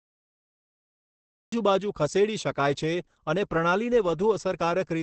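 Cut-off start at 1.52 s: the speech recording opens with digital silence until 1.52 s, then drops straight into the middle of a sound with no natural attack or fade, as though capture began late and caught the talker partway through. Opus compression runs throughout: the audio is heavily damaged, muffled and hoarse, with nothing above about 8.4 kHz. That fits Opus likely switched into its SILK speech mode at wideband, at a low rate around 12 kbps, where detail gets traded for a coarse, rough texture.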